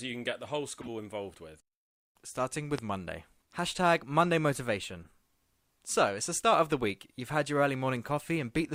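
Corrupt frame decoded, in this speech recording, at 0.80 to 0.89 s, between "can get the whole" and "involved with", and again at 5.02 to 5.07 s: damaged compressed frames were played anyway, so misread gains and codes throw energy to the wrong frequencies. The result is a short chirpy burst. The first reaches about -25 dBFS and the second is fainter, near -45 dBFS, each spanning what sounds like a handful of frames. A loud pop at 2.78 to 2.81 s jumps about 15 dB above the speech as a single sharp crack while the talking continues beneath it, likely a voltage transient from a switch, plug or static discharge passing through the downstream circuitry.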